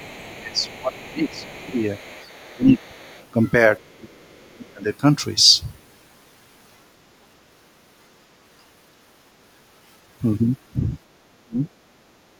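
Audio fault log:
0.0 to 11.67 s, speech suppressed in double talk: The speech dips sharply at 0.0 to 0.25, 0.41 to 1.79, 2.43 to 3.02, 3.93 to 4.88 and 11.29 to 11.67 s, by about 20 to 40 dB. Both sides likely talked at once, so the echo canceller turned everything down.
0.05 to 3.93 s, other side's voice leaking through: A faint second voice sits under the speech at 0.05 to 2.63, 2.79 to 3.27 and 3.82 to 3.93 s, about 25 to 40 dB down. It is likely loudspeaker echo that the canceller left in the microphone signal.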